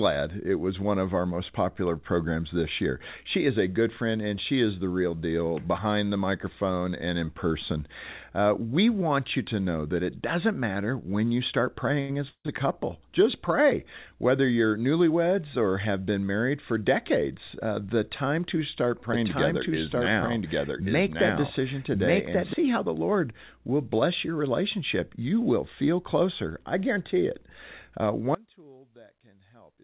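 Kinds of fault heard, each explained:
Short stall from a late packet: at 12.0 s, after "matter when you start", a sound is held about 87 ms too long because a late packet emptied the jitter buffer.
Call audio freeze: around 12.3 s the sound is continued as a fading buzz or hiss then goes silent for about 80 ms, likely a call audio freeze from delayed packets, resuming without loss.
Doubled audio track: from 19.13 to 22.53 s a second, equally loud copy trails about a second behind, likely a doubled audio track from duplicate capture.
Audio dropout to a faint residue: at 28.35 s the sound cuts abruptly to a faint leak about 25 dB down until the end, likely a dropout with the path still live.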